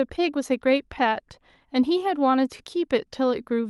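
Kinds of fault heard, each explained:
Clock drift between sender and receiver: The sending device's clock runs slightly slow, about 1.5 percent, so the receiver's buffer keeps draining and must be topped up. On a waveform this shows as faint seams and slightly stretched stretches scattered unevenly through the speech.
Repeated timing corrections: From 0.28 s to 3.55 s the receiver keeps repeating short slivers of audio, adding about 70 ms in all and pacing the speech at 98 percent speed. A spectrogram shows small duplicated slices at irregular spacing.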